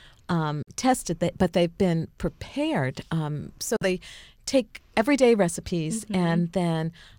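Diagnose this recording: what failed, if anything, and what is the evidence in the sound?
Bluetooth dropout at 0.62 to 0.69 s and 3.76 to 3.86 s: the speech cuts to silence, then resumes further along, as if it had kept playing. This is likely a wireless playback link losing packets, which fits roughly three packets missing per gap.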